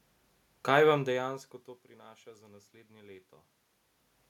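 No technical faults are audible.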